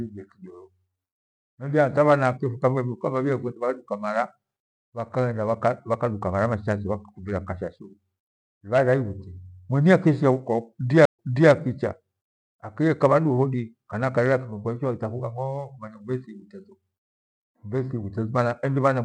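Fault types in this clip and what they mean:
Stream reconnect: the connection dropped and the player restarted its decoder mid-stream, leaving about 127 ms of silence near 11.05 s; playback then resumes roughly 336 ms earlier than where it stopped, so a short stretch repeats, with the first frame faded in.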